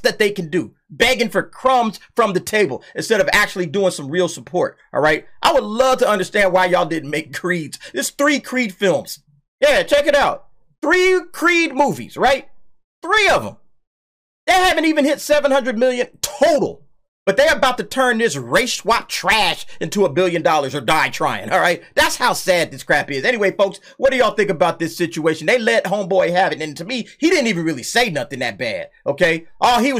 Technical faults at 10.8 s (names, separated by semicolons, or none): none